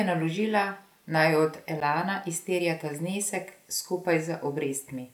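At about 1.80 s, between "naložila naj od" and "izterja ta znesek", there's a block of digital silence roughly 11 ms long. The signal drops straight to silence and snaps back with no fade, so it comes across as a sharp tick. The gap fits a 512-sample buffer that never got filled.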